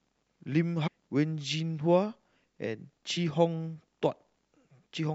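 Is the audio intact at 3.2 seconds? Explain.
No. Damaged data in a compressed stream produces a brief blip at 3.16 s, just before the point asked about. Corrupted bytes there leave the decoder unable to read those frames, so it loses sync and hunts for the next valid frame header, briefly glitching the speech.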